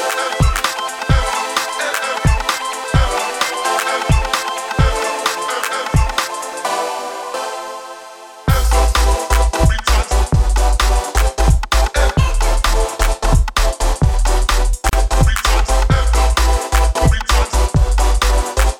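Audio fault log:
14.89 to 14.93 s, gap at a join of encoded pieces: the sound drops into a 36 ms gap with smeared edges, then resumes exactly where it stopped, because two separately encoded pieces were joined with their encoder start delay and final-frame padding left untrimmed.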